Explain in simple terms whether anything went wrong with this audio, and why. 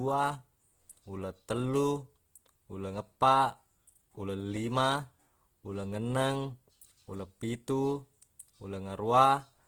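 Yes. The speech sounds rough and grainy from start to finish, which points to Opus compression as the likely cause. Unlike MP3 damage, it swirls less. The encoder filled missing detail with copies of lower bands or with noise, and the full treble range up to about 20 kHz is kept.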